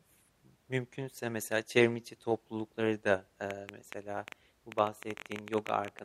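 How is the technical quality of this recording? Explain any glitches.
The recording has one clear glitch, a train of clicks in its second half. From 3.51 s, right after "çevrim içi toplulukları da", until 6.00 s, sharp ticks pop over the speech and through the gaps, about 9.7 per second at an uneven pace, some thirty in all, with peaks about 10 dB above the speech. Each click has much the same shape, which points to a repeating electrical pulse, likely interference from nearby equipment or a faulty connection or power supply.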